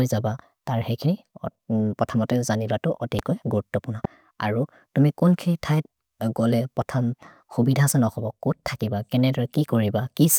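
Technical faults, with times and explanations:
3.19–3.21 s and 4.05–4.07 s, loud pop: a sudden voltage pulse, likely from a switch, plug contact or static discharge, entered the signal path twice. Each time it makes a single sharp pop lasting about 25 ms and peaking about 10 dB above the speech, which carries on underneath.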